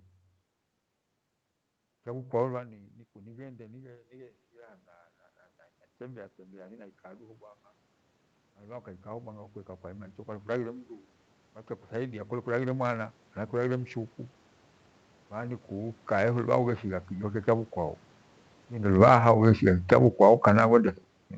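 From about 2.04 s the speech and the room noise behind it swell together, slowly, until about 10.86 s. This is automatic gain rising. Just after 2 s the talker moves away and the level at the microphone falls by about 18 dB. The gain control raises its gain by about 14 dB to compensate, which lifts the background along with the voice. A smaller rise of the same kind, about 4 dB, follows from 11.97 s to 13.96 s.

Near 18.5 s the talker moves, and from 18.8 s the sound starts loud and then sinks with its background until about 20.63 s. This is automatic gain falling. The control found the input too loud, or its background noise too strong, and lowered its gain by about 7 dB. Overlapping it, from 19.14 s to 20.9 s, the gain rises again by about 4 dB, so the level dips and then partly recovers, with the noise floor following each move.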